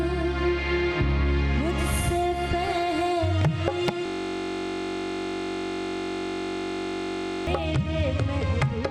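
At 4.06 s the sound locks into a steady buzz at about 46.9 Hz that lasts until 7.47 s. This is a system hang loop. The computer or driver stalled while the sound hardware kept replaying the same ring buffer. One 21.33 ms slice repeats roughly 160 times, and the buzz pitch is simply that slice's repeat rate. The 21.33 ms period fits a 1024-sample buffer.

From 7.65 s to the end at 8.90 s the treble goes dull and a gritty, grainy noise rises. This is a Bluetooth SBC bit pool drop. A congested link forced the phone to cut the bits given to each block. The top sub-bands were starved and the remaining bands were coarsely quantised. The sound points to the bit pool falling from 28 to 13, or roughly 102 kbps.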